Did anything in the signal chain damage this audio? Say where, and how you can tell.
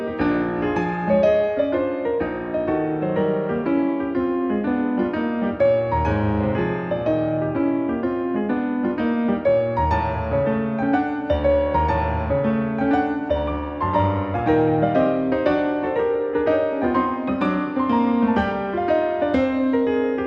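No, nothing along the way seems to have hurt this one; it sounds just as it should from one stage to the next.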